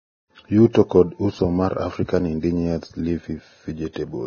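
Across the whole speech clip, after a smooth fade-in near the start, there is heavy coding damage whose sound most likely comes from Vorbis compression at a low bitrate, around 17 kbps. Nothing is present above 6.5 kHz, and the remaining treble is grainy and hissy because fine detail was quantised into noise of similar energy. Unlike broadband background hiss, this graininess follows the signal, appearing with the speech and collapsing with it.

At 0.73 s, just before "kod uso mar", a brief hiss of about 18 ms runs ahead of a sharp onset. This is pre-echo. The attack fell late in a transform block, and quantisation noise sized for the loud part spread back across the quiet moment before it, softening the attack. A click would be a single impulse, and a breath would sit apart from the onset. This hiss instead leads straight into the attack it belongs to.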